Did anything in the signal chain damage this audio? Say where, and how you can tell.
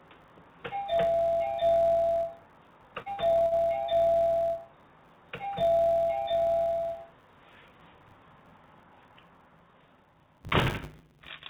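Yes. There's a filter restarted on every block somewhere in the processing, probably at the driver or buffer stage, and it runs through the whole clip. You can hear a steady 100 Hz buzz riding on the audio that swells and fades with the signal's level. That's the filter dropping its state and starting each 10 ms block from silence, so every block boundary kicks off a little transient. The missing top end above 4 kHz is just the call codec's normal narrowband limit.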